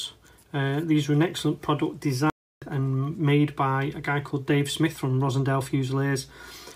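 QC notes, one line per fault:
2.30–2.62 s playback stall: the sound cuts to silence for 318 ms mid-flow, then resumes, likely because the player's buffer ran dry or its thread was blocked.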